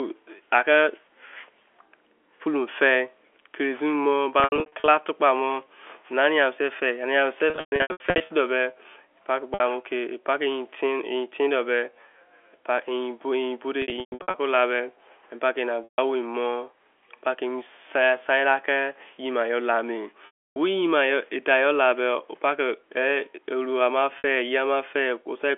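Held, buzzy repeats and brief fades to silence break the speech at 4.4–4.88, 7.5–8.3, 9.54–9.6, 13.82–14.34, 15.84–15.98, 20.26–20.56 and 24.18–24.24 s. This is packet loss with pitch repetition. Missing stretches of the narrowband telephone stream, in runs up to 300 ms, were bridged by looping the last pitch period.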